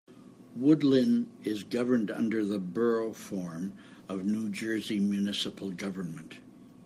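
Nothing in this speech recording points to a technical problem with the signal.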